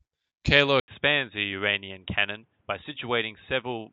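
Input switched to a poorer device at 0.8 s in this speech clip: after an 80 ms silence the sound turns dull and boxy, with nothing above 3.8 kHz, slightly quieter and over a faint new background noise, likely a change to another microphone or a headset's call profile.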